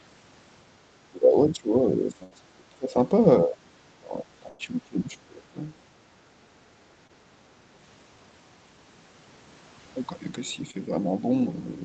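From 1.1 to 2.99 s and again from 3.43 to 5.57 s, the speech dips in level, by about 20 dB and then about 25 dB at the deepest. This is speech suppressed in double talk, likely because the echo canceller mistook the talker for loudspeaker echo while the far side spoke.

Inside those stretches are two bursts of packet loss, at 2.23 to 2.33 s (about 80 ms missing) and 4.49 to 4.61 s (about 100 ms). The receiver extends the last sound and fades it, then resumes further on with audio gone.

At 7.07 to 7.11 s and 10.71 to 10.75 s, short concealed packet loss replaces about 20 ms each time with extrapolated sound. Each is heard as a brief smear or wobble within the 8 kHz band of the Opus path.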